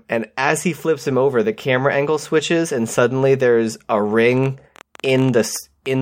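From 4.38 s to 5.87 s a train of clicks runs over the speech: about twenty sharp, near-identical ticks at roughly 12.1 per second, spaced unevenly, and peaking about as loud as the speech itself. The likely cause is interference from nearby equipment or a faulty connection or power supply injecting repeated pulses. The clicks have a consistent shape, so this is not random crackle, nor a buzz, which would repeat too fast to hear as separate ticks.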